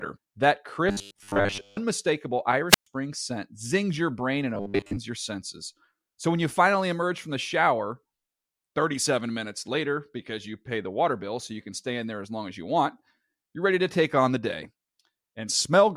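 From 0.89 to 1.78 s the speech turns into a stiff, metallic buzz pinned at 100 Hz, still loosely tracking the phrasing: robotic sound, likely from repeated short buffers, where a 10 ms chunk keeps looping while most of the real audio gets skipped. It happens again from 4.55 to 4.98 s.

Between them, at 2.69 to 2.87 s, there's a wireless microphone squelch dropout. The radio signal fades, hiss swells briefly, then the receiver mutes for about 122 ms before the speech returns.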